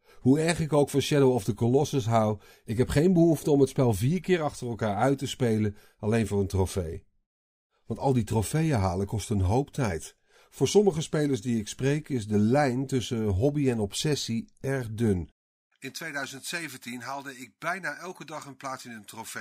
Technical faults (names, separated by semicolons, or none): dropped samples